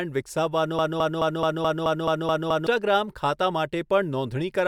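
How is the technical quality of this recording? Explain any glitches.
The recording has one clear glitch, a broken-record loop. From 0.79 s to 2.67 s, a fragment about 0.21 s long repeats nine times back to back, producing a rapid stuttering cycle. The cause is likely a stalled player or stream re-sending its last buffered piece, so the speech belonging to that stretch is missing.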